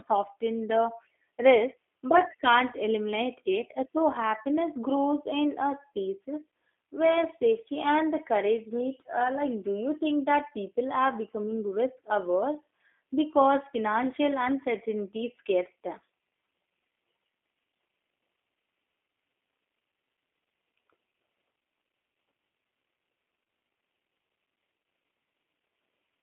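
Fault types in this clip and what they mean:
G.729 codec, throughout: the speech is resynthesised from a vocal-tract model, pitch prediction and sparse pulses in every 10 ms frame, which fits an 8 kbit/s VoIP link. It sounds plainly rough and synthetic, squeezed into a 250 Hz to 3.5 kHz band.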